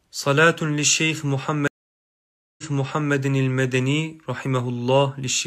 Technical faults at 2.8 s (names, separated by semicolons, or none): stream reconnect